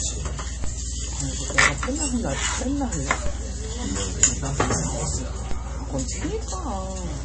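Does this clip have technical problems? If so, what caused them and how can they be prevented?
Yes. Nothing above 8.3 kHz survives and the sound is watery and swirly, likely MP3 compression at a low bitrate around 32 kbps, unlike plain low-pass filtering, which wouldn't swirl. Encode at a higher bitrate.

A DC step at 0.64, 3.26 and 5.51 s gives low thumps that fade as a 5 Hz high-pass bleeds the offset away, with no dropout or lost audio as a glitch would cause. Keep converters from recalibrating mid-recording and block DC before switching inputs.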